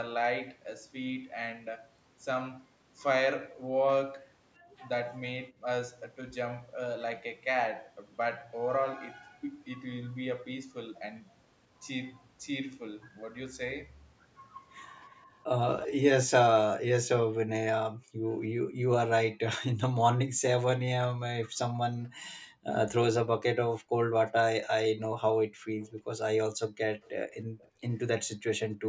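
At 4.59 to 4.7 s the room background dips by about 14 dB. This is background gated by the echo canceller. It turns the microphone down hard while the far side plays. From 15.14 to 15.88 s a faint copy of the speech trails by 316 ms, about 15 dB down. This is an echo leak, likely from residual loudspeaker sound the canceller missed. Gating returns at 17.91 to 18.76 s and 20.3 to 20.42 s, each dropping about 40 dB, then at 21.96 to 22.65 s by about 24 dB. A second, quieter leak runs from 24.64 to 27.69 s, delayed 331 ms, roughly 30 dB down. Overlapping it, from 25.47 to 28.86 s, the background gates out again by up to about 40 dB.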